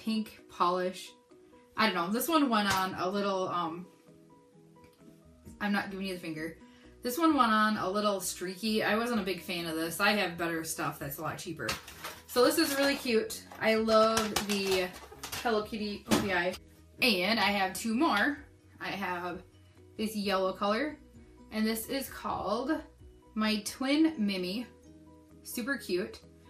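From start to finish the sound is dull and gurgly, with a granular, watery texture in what's left of the top end and some shimmer as high detail drops in and out. That's the signature of MP2 compression, likely: Layer II was starved of bits, so it shut off upper sub-bands and quantised the remaining ones coarsely. The damage is plainly audible and fits a rate of around 80 kbps, low-grade digital radio territory.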